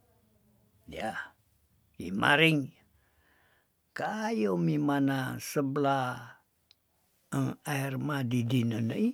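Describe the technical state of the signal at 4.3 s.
At 4.3 s the speech signal is intact, with no dropout, distortion, glitch or other technical fault at that point.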